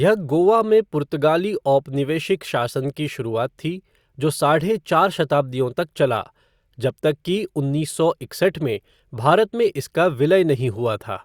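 Speech recording with no audible technical faults anywhere in the clip.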